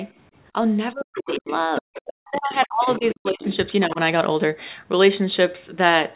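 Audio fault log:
0.93–3.99 s, speech suppressed in double talk: the talker's voice collapses at 0.93–1.47 s, 1.81–2.01 s and 2.17–3.45 s, by around 40 dB, with a milder dip of about 10 dB at 3.87–3.99 s. The likely cause is an echo canceller that could not tell talker from loudspeaker echo and so turned both down.
1.16–3.56 s, other side's voice leaking through: a second, fainter voice sits under the talker at 1.16–1.59 s, 1.75–2.13 s, 2.94–3.14 s and 3.43–3.56 s, roughly 10 to 15 dB down. This is likely loudspeaker playback that the echo canceller left in the microphone signal.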